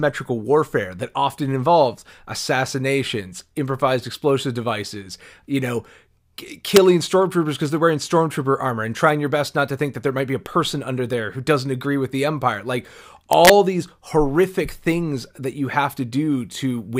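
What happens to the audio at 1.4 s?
Nothing goes wrong at 1.4 s; the speech carries on intact through that moment with no audible fault.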